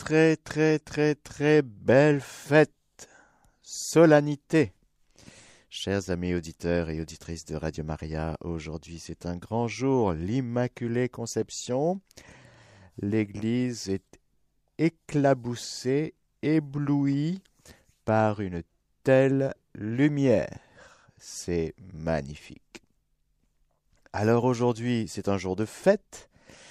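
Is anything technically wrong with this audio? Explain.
No, nothing technically wrong stood out on listening to this speech recording.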